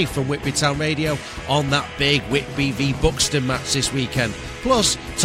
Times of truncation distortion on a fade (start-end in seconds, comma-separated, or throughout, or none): none